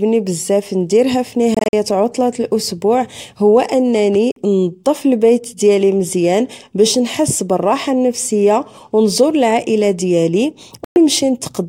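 Speech with three Bluetooth dropouts, likely from packets missing the headphones' deadline: broken gaps over 1.54–1.73 s after "بزاف نديرها", a short hole at 4.32–4.36 s before "نظف البيت ديالي مزيان", and 10.84–10.96 s after "أو نزور العائلة ديالي". Playback resumes as though time kept running.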